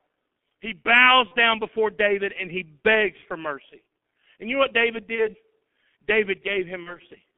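From the start, the speech carries heavy G.723.1 codec damage. It sounds muffled and hoarse, with smeared consonants, consistent with a rate near 6.3 kbit/s. On a spectrogram, energy sits only between about 200 Hz and 3.5 kHz, with coarse, blocky formant tracks.

VoIP packet loss concealed by the speech codec occurs at 1.28–1.35 s, 5.15–5.29 s and 6.83–6.99 s. Each gap fits one lost 30 ms frame. The decoder replays the previous pitch and filter at falling gain, so there is a brief buzzy tone or coloured noise that fades, and its effects linger. On the waveform, the envelope sags, and the spectrogram shows a flat, repeated spectrum.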